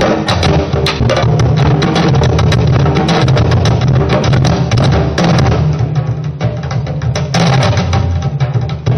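At 0.99 s the audio jumps forward, the signature of compressed frames skipped. A couple of whole frames, each about 23.2 ms long, never reach the output, so roughly 50 ms of sound simply vanishes. On a waveform the envelope shifts abruptly, and a spectrogram shows a thin vertical seam where the texture on either side fails to line up.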